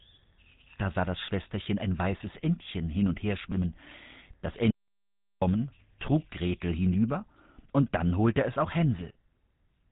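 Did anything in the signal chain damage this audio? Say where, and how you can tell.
Yes, two things. At the codec stage, the whole clip has that buzzy, gravelly GSM full-rate character, and nothing gets through above 3.8 kHz. The damage fits a 13 kbps stream: the vocal tract is modelled and driven by thinned-out, regularly spaced excitation pulses.

Then there's an audio dropout to silence from 4.71 to 5.42 s, about 0.71 s of silence with no room tone at all, and the speech cuts off and resumes mid-flow. The input likely dropped at the device or link while the recorder kept writing silence.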